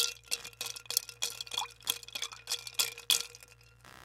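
A recording of sounds with computer activity noise from 0.36 s to the end: a buzzing chirp pulsing around 70 times per second, roughly 25 dB below the wanted sound. Processor or graphics load shifts the shared ground, so it tracks the machine's activity.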